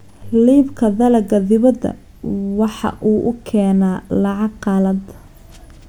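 Speech, with no audible technical faults anywhere in it.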